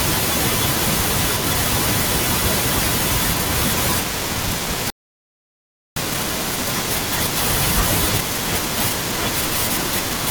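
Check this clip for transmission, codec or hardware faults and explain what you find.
One fault is present, a playback stall. At 4.9 s the speech stops dead mid-flow. Silence lasts about 1.06 s, to 5.96 s. The player likely ran dry of data or was blocked. It then resumes, leaving an abrupt gap.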